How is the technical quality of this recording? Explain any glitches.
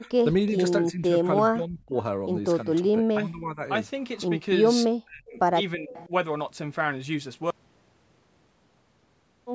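The recording has two kinds of call-processing faults: repeated level dips consistent with speech suppressed in double talk, and one brief echo leak. The band stops at 8 kHz, consistent with call microphone processing.

Speech suppressed in double talk: the speech dips at 0.01–0.16, 0.48–0.59, 0.91–1.15, 1.46–1.95, 2.64–3.61, 5.03–5.39 and 5.75–6.12 s, by a few dB up to roughly 40 dB. This is likely an echo canceller turning down the near talker while the far side also speaks.

Echo leak: at 5.93–6.06 s a faint copy of the speech returns 333 ms late, about 20 dB below the direct sound. This likely comes from a loudspeaker-side echo canceller failing to remove the echo its microphone picked up and sending the remainder back.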